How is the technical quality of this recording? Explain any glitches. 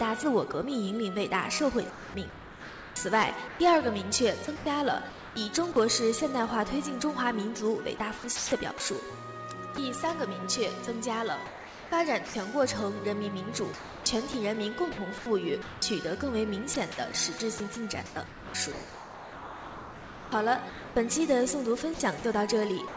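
Not great: the audio keeps getting cut out and patched with synthetic background. Underneath, the band stops at 8 kHz, which points to a G.722 call path at around 64 kbps, and its coding noise sits under everything.

Sound dropped by the voice detector at 0.52 s: there's a brief hole of about 20 ms where the real audio gives way to steady hiss and then returns. The likely cause is the sender's voice detector judging that moment to be background and going quiet for it. The receiver then fills the gap with comfort noise until sending resumes.

Sound chopped by the voice detector across four stretches: 1.9 to 5.76 s, 7.98 to 9.78 s, 11.46 to 12.34 s, and from 13.74 s to the end. The detector likely flipped between sending and muting more than once in each stretch. Comfort noise covers about 1.44 s, 0.28 s, 0.54 s and 3.29 s of those stretches respectively. You hear choppy, clipped-off sound.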